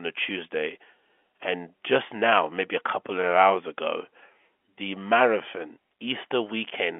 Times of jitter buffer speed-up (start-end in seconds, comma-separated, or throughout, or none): none